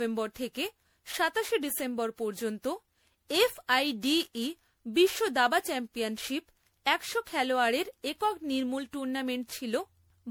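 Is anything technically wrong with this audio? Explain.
Yes: throughout, the speech sounds swirly, hollow and smeared with blurred attacks, likely generation loss from around ten rounds of MP3 encoding, consistent with roughly 96 kbit/s.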